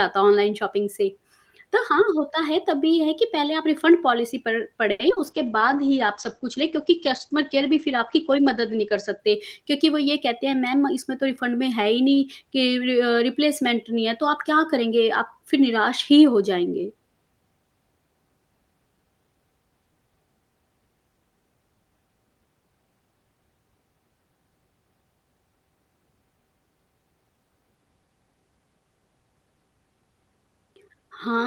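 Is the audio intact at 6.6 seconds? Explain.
No. 6.6 s falls inside a call bitrate drop from 5.25 to 9.25 s. The speech turns coarse and muffled, with the top end cut from 20 kHz to 8 kHz. That fits the encoder being throttled from roughly 32 to 12 kbps after the bandwidth estimate fell.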